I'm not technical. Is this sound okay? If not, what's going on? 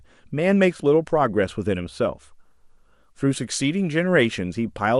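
No. MP2 compression damage runs through the whole clip, from start to finish. The speech sounds dull, with a gurgling, grainy roughness behind it. This is likely from the MPEG Layer II format squeezing the file too hard: it divides the sound into narrow frequency slices and shares out a small data budget, so the upper slices keep dropping out and the remaining ones are stored crudely, much like weak digital radio.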